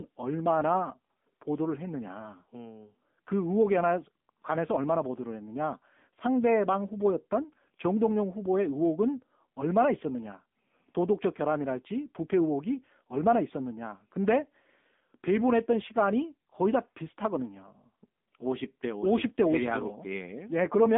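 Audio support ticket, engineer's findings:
AMR narrowband mobile codec in path, whole clip. Speech limited to a 200 Hz to 3.6 kHz line band, nothing above 3.7 kHz. Plainly audible codec damage: buzzy, synthetic voicing from the pulse-driven vocal-tract model, which points to a mode near 8 kbps.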